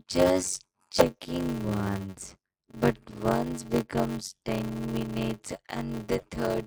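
Throughout the whole clip a steady buzz at 93.8 Hz sits under the speech, and everything runs slowly, at 0.625 of normal speed, yet the pitch stays close to natural. This is a block size mismatch (padded). The reading stage takes blocks that fit a 512-sample size, but the writing stage fills only part of each one, and the rest is zero-filled. That silent tail repeats once per block, producing the buzz and stretching the timing. A plain sample-rate error would shift pitch along with speed, which this does not.

At 0.98 to 1.03 s, and again at 6.16 to 6.25 s, the sound briefly breaks up and then resumes further ahead, as if a short stretch had been skipped. The first disruption lasts about two 24 ms frames and the second about three to four. The cause is likely a broken MP3 bit reservoir: frames were lost, and the following frames reached back for borrowed data that was no longer theirs, so they decoded as garbage until the stream resynchronised. 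An ordinary dropout would leave a clean gap without the forward jump.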